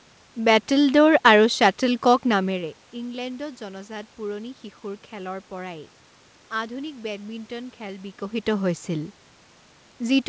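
Nothing stood out on listening that would point to a fault in the recording or transmission chain.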